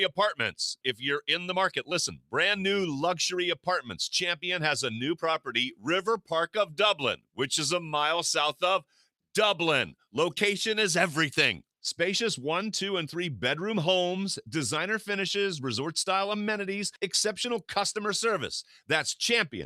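Sound cut by the noise suppressor at 2.17–2.33 s and 8.81–9.06 s: the suppressor treated wanted audio as noise, pulling it down by about 12 dB and 10 dB.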